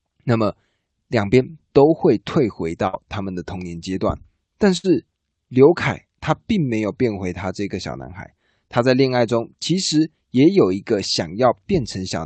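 At 2.87 to 2.95 s and again at 4.77 to 4.86 s, a burst of packet loss leaves about 60 ms of speech missing, concealed by a fading continuation rather than clean silence or a click.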